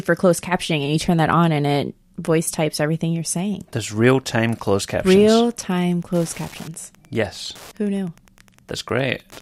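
Wi-Fi interference runs from 4.46 s to the end of the clip: a steady ticking about ten times a second, one tick every 102.4 ms, roughly 30 dB below the speech. A nearby Wi-Fi radio's beacon is being picked up and rectified by the audio circuitry.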